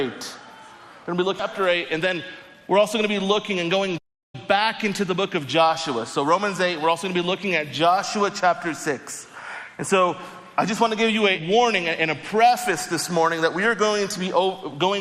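At 1.39 s the audio jumps abruptly forward with no gap, and roughly 0.7 s of material is simply missing, its two sides butted together so the flow lurches. This is a skip ahead: audio that had already been overtaken by later arrivals was discarded, either lost in transit or thrown away by an overflowing jitter buffer, and playback resumed from the newer data, cutting the delay by about the same amount. From 1.59 s to 3.69 s the sound runs noticeably quick and slightly rushed while keeping its normal pitch, playing at about 113 % of its proper speed. That is a jitter buffer speed-up. The receiver found itself holding more audio than it wanted and trimmed it back by repeatedly cutting out tiny slices of one or a few pitch periods, shedding around 0.3 s in total across that stretch without shifting the pitch. Then, from 3.97 s to 4.35 s, the output goes dead silent for about 358 ms in mid-flow before carrying on. 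This playback stall is likely the player running dry of data or its output thread being blocked, leaving nothing to send to the output until it recovered.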